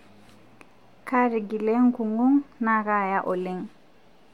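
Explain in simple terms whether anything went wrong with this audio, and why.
Nothing went wrong with this audio, so there is no problem to explain.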